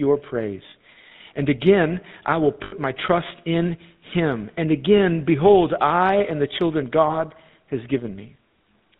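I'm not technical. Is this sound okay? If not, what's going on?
No. The speech was sent through the GSM full-rate codec, the compression used by early mobile phones. It rebuilds the voice from a simple model of the throat and mouth, driven by a coarse string of pulses, and discards everything above 4 kHz. Across the whole clip that leaves the voice sounding plainly buzzy and gravelly, with a muffled, phone-like quality because the crisp upper sounds are missing.

There are also lost GSM frames, where pieces of the phone signal never arrived. The phone covers each hole by repeating the last good piece it received, so instead of a gap you hear the sound briefly held as a rough, metallic ring. This happens from 2.64 to 2.73 seconds, covering about 80 milliseconds of missing signal, and again around 7.08 to 7.18 seconds, where about 20 milliseconds went missing.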